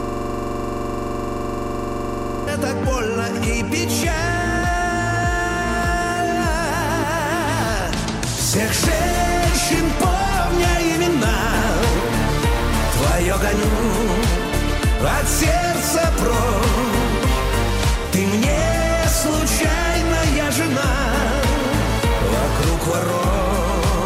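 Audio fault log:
0.00–2.47 s, system hang loop: already under way when the clip opens, a single 42.67 ms slice repeats exactly, giving a rapid rattling buzz at 23.4 Hz. The playback hardware kept cycling its ring buffer while the system stalled; the length fits a 2048-sample buffer.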